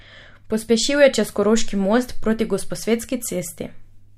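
No technical faults can be heard in this recording.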